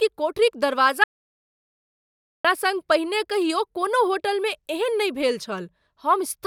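A speech clip with an audio dropout to silence from 1.04 to 2.45 s: about 1.4 s of sound cuts off abruptly, with no room tone. The waveform drops to silence and the spectrogram goes fully blank, likely from lost input while recording continued.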